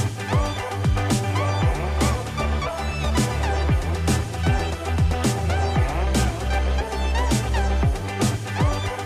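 No technical faults are audible.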